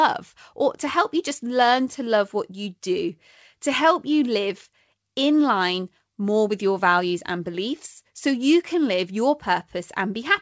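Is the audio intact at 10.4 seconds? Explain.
Yes, the audio is intact at 10.4 seconds, where the speech passes through the G.722 call path with its normal band limit at 8 kHz and nothing breaks up or drops out.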